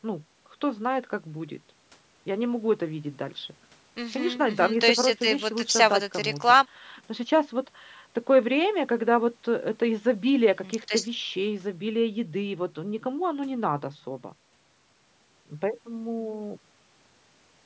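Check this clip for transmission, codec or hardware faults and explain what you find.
Nothing here points to a transmission or hardware problem, just speech that has passed through ordinary call microphone processing, with the lowest bass trimmed away and nothing above 8 kHz, which is exactly what that path does.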